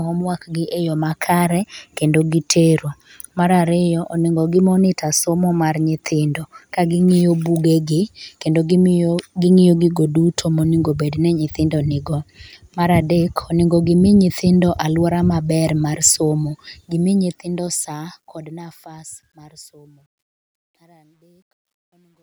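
Speech fades out from about 17 s to 22.2 s, right after "mar somo". From 16.78 s to the end at 22.23 s there is truncation distortion on the fade. The fade stage drops low bits without dither, which fits an 11-bit path. From 19.45 s the tail turns gritty and stepped.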